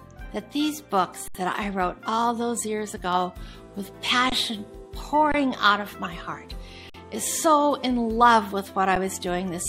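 A corrupt frame decoded at 0.32 s puts a brief blip of misplaced energy into the audio, lasting roughly one compressed frame, where flipped bits gave the decoder wrong gains or codes. Underruns with a held sample occur at 1.28 to 1.35 s (70 ms), 4.30 to 4.32 s (23 ms), 5.32 to 5.34 s (23 ms), 6.90 to 6.94 s (46 ms) and 8.96 s (8 ms). Each time, the sound stops abruptly into a flat, held level, with the 23 ms and 46 ms gaps fitting a 1024-sample buffer running dry once and twice. Since playback resumes where it left off, the restarts are soft rather than clicky.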